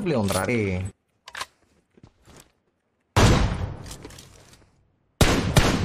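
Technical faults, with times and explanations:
0.48 s and 3.94 s, compressed frames skipped. At each point the audio jumps forward, losing around 70 ms of material. The decoder has not played a short run of compressed frames, either because they were missing or because they were rejected as damaged. The jump length fits about three frames of roughly 23.2 ms each.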